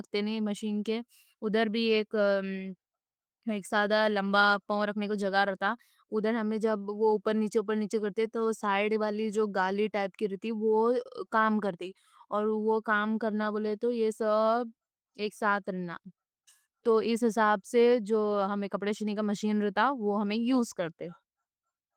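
The speech carries no technical faults, with its Opus voice compression in the hybrid fullband mode leaving only light coding traces and content reaching up to about 20.2 kHz, which fits a bitrate around 24 kbps.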